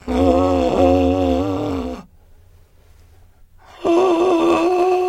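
From 0.00 to 1.98 s the music suffers overlap-add ripple: the signal was split into windowed frames and rebuilt with an overlap whose windows fail to sum to a steady gain, so the level dips and recovers once per frame. Here the swing is deep, about 60 dB, repeating roughly 200 times a second, which turns the music into a harsh, metallic buzz with extra tones around each note.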